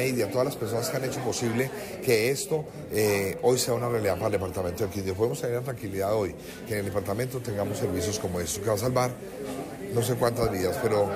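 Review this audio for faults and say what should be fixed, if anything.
A corrupt frame decoded at 0.59 s: flipped bits in a couple of compressed frames were played anyway, so misread gains and codes scattered energy into wrong frequencies, giving a brief, faint glitch peaking around -45 dBFS. Fix it with checksums on each frame so damaged ones are concealed or resent instead of decoded.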